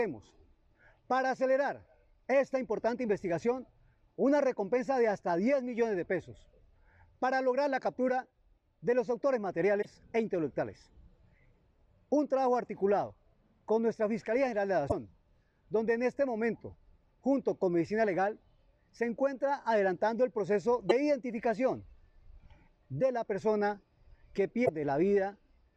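The audio has four brief glitches, at 9.81–9.85 s, 14.88–14.92 s, 20.89–20.92 s and 24.65–24.69 s, each lasting 30–45 ms. At each one the sound skips ahead and a short chirp, noise burst or hole takes its place. These are likely a broken MP3 bit reservoir: after missing frames, the decoder reads the borrowed bits from the wrong frame. A spectrogram would show thin vertical smears or gaps roughly 30–45 ms wide, and the waveform would show abrupt discontinuities.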